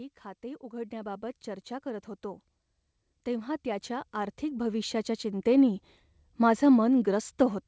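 Automatic gain rising from 0.41 to 1.32 s, before "चर्चा करत होतो", lifts speech and background together by about 4 dB. It returns from 3.24 to 5.79 s, about 10 dB. The waveform envelope widens steadily, and the spectrogram brightens evenly across all bands. The spectrogram's empty band above 8 kHz fits a wideband call codec.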